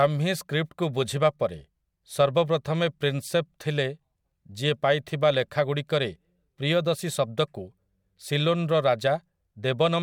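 No technical faults are audible.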